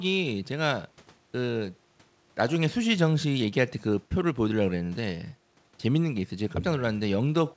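Nothing goes wrong anywhere in this speech clip; it has simply come through a call path, which is why there is nothing above 8 kHz, a limit that fits a wideband codec such as G.722.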